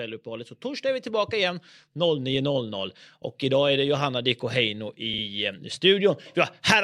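At 5.13 s to 5.22 s, repeated frames: a 48 ms block, which points to a pair of compressed frames, plays twice more, adding 96 ms. It sounds like a brief stutter. The waveform shows the same short shape copied back to back, and the spectrogram shows identical column patterns in a row.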